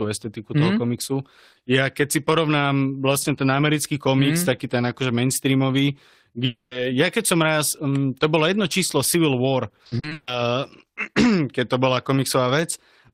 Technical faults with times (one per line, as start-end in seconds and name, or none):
6.45-6.73 long network dropout
9.69-10.29 repeated packet loss (robotic sound)